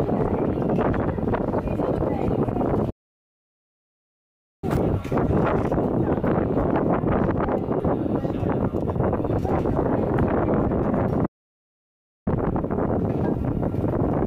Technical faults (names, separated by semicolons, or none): playback stall